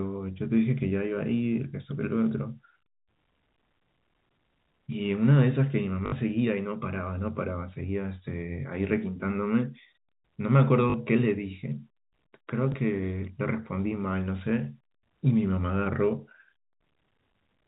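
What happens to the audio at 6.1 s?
Between 6.06 and 6.12 s there is packet loss with the last packet repeated. About 60 ms of audio went missing, which fits three lost 20 ms packets, and the receiver filled the gap by replaying the last packet it had. The replays seldom line up with the pitch, and the short run buzzes at about 50 Hz, a brief robotic stutter. A plain dropout would instead leave a silent gap.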